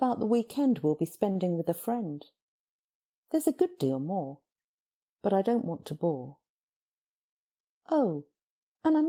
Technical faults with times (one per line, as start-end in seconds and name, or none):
1.31-1.37 short stall from a late packet
6.89-7.94 jitter buffer speed-up